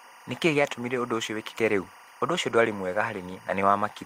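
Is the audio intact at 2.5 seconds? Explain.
No. From 2.49 to 2.55 s there is a lost packet rebuilt from error correction. It covers about two lost packets. Each packet that followed carried a low-bitrate spare copy of the missing one. The decoder played those copies in place of the originals, so there is no dropout. About 40 ms of the speech is rebuilt this way. It comes through rougher and noisier than the audio around it, a brief grainy patch instead of silence.

Timecode bleed also runs under this moment, as it does through the whole clip. Linear timecode from a nearby track or cable has leaked into the audio. Its square wave flips between pitches near 1 and 2 kHz at a 24-frames-per-second rate. It sits very roughly 25 dB below the speech. It is heard as a steady chirping warble behind the speech.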